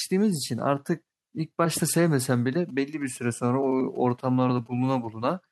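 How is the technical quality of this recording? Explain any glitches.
The recording has one interference fault. From 2.31 to 5.06 s, GSM signalling bursts are heard. A nearby 2G phone sends short groups of radio pulses. The audio circuit rectifies them. The result is a galloping ticking pattern with brief 217 Hz buzzes, roughly 30 dB below the speech.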